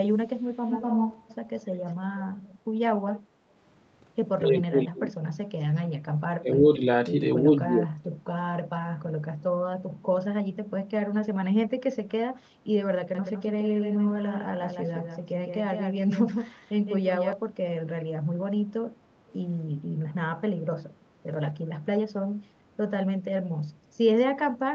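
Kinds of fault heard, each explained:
Echo leak: a roughly quarter-second-delayed copy of the speech comes back, loudest from 0.68 to 1.25 s, likely from a speakerphone's canceller letting some through.
Speech suppressed in double talk: the talker dips or chops out while the far side talks, up to about 25 dB around 4.4 to 5.2 s, likely canceller confusion.
Doubled audio track: from 13.15 to 17.33 s a flat second copy trails about 150 ms behind, about 5 dB quieter, likely a second capture path mixed in.
Background gated by the echo canceller: at about 21.0 s the room sound briefly drops by about 7 dB for roughly a tenth of a second, then comes back.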